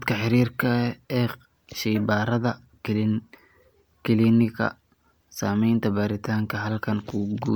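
Generation loss throughout the speech: swirly, hollow smearing and blurred attacks, likely from about seven MP3 re-encodes, each quantising afresh on a shifted frame grid.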